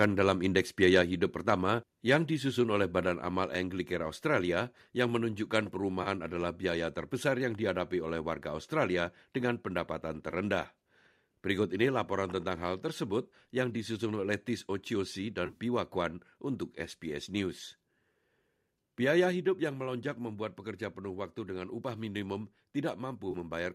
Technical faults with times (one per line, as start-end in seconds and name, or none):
0.01-0.05 microphone overload
0.83-0.97 microphone overload
1.02 microphone volume stepped down
2.11-2.16 microphone overload
3.06 microphone volume stepped down
6.03-6.07 AAC frame loss with concealment
10.31-10.34 AAC frame loss with concealment
15.46-15.58 AAC frame loss with concealment
19.32 microphone volume stepped down
23.30-23.36 AAC frame loss with concealment